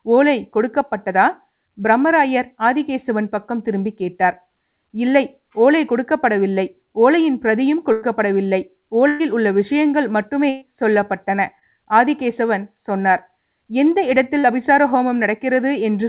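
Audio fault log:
7.92–8.04 s, 9.08–9.21 s, 10.49–10.63 s: burst of packet loss. About 100, 120 and 120 ms of audio never arrived. The receiver stretched the last sound and faded it, giving a held buzz or decaying hiss, then playback jumps ahead with that stretch missing.
11.59–11.63 s and 14.39–14.45 s: short concealed packet loss. Roughly 20 and 40 ms went missing. The decoder bridged each hole by extrapolating the preceding sound, heard as a brief smear or wobble within band-limited audio that has nothing above 4 kHz, consistent with a G.711 call path.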